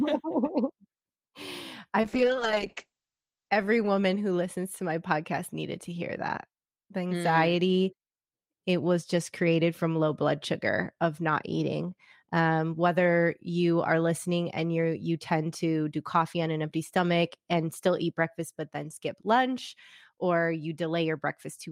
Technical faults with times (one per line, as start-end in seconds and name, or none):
2.02-3.57 call bitrate drop